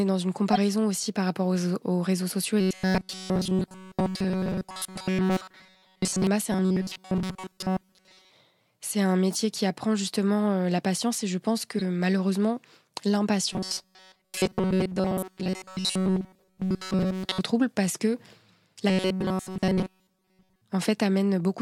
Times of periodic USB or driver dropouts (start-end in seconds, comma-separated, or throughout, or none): none